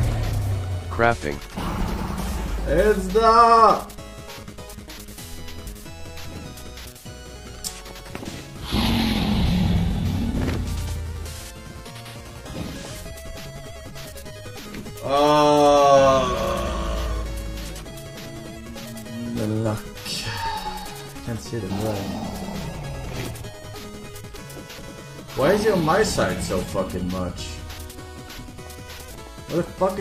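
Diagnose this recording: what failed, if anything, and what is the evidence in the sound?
No stage of the chain, from the analogue wiring and converter through to playback, leaves any audible disturbance anywhere in this recording.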